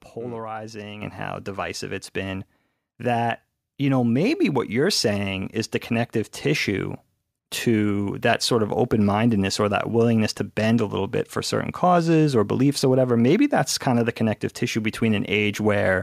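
At 1.02 s the microphone volume stepped up: the calling software judged the input too quiet and raised the device's gain by about 8 dB in a single jump. Speech and background noise rise together, so the room sounds suddenly closer and louder. On a waveform the envelope widens abruptly at that instant. On a spectrogram every frequency band, including the noise floor, brightens at once along a sharp vertical edge.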